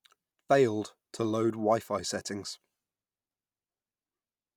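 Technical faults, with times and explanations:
No technical faults can be heard in this speech recording.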